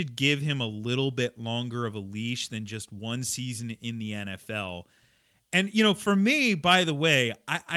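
No technical faults can be heard in this speech recording. Nothing at any point in the audio calls for a fault to be noted.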